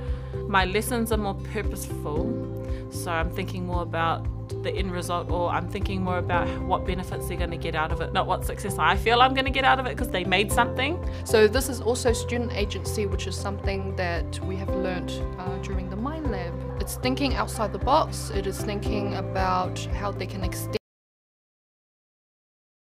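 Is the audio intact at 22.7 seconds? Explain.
No. The input likely dropped out at 20.77 s, from a lost connection or a stray mute, while recording carried on writing silence. This audio dropout to silence cuts the sound off abruptly and leaves total silence, with no room tone, until the clip ends.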